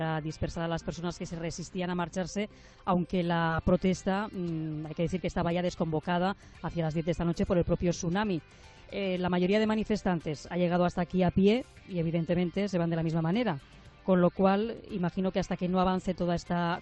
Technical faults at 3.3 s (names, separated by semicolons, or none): none